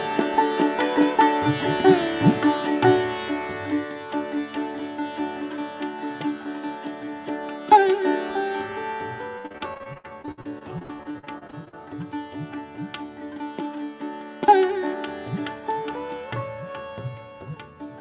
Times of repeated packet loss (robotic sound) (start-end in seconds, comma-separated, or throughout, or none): 9.38-11.75